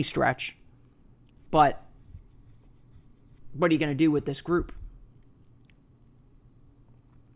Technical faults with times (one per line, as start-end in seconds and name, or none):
none